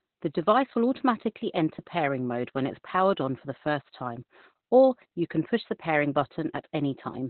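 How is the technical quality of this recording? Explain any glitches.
Quality is poor, with heavy codec damage throughout. Opus voice compression runs the whole length. Nothing reaches above 4.2 kHz, so the speech is muffled. The narrowband linear-prediction coder rebuilds the voice from coarse excitation, which sounds hoarse and slightly robotic. This fits a bitrate around 8 kbps.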